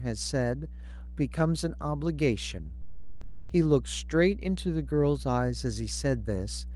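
Mains hum at 60 Hz runs under the speech for the whole clip, loud enough to sit only a little below the voice. Power-line energy is leaking into the signal, most often through a ground loop or a nearby transformer, and it comes through as a constant low drone with a buzz from its low harmonics. On a spectrogram it draws an unbroken horizontal line at 60 Hz, with weaker lines stacked above it, and the waveform rides on a visible low-frequency ripple.

From 2.81 s to 3.49 s, about 680 ms of speech is dropped by the voice detector and replaced with comfort noise until the speech resumes. This was likely caused by the sender's voice activity detection misreading the sound as background and halting transmission, which fits a codec's discontinuous-transmission mode, while the receiver filled the gap with comfort noise. A spectrogram shows the speech harmonics cut off abruptly for that stretch.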